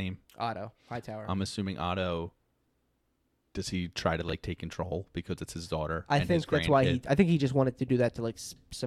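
At about 4.28 s, running to 4.33 s, there's a case of frames out of order: two neighbouring runs, which fits three frames each, were swapped on decoding. That brief stretch plays halves-reversed, giving a garbled flutter.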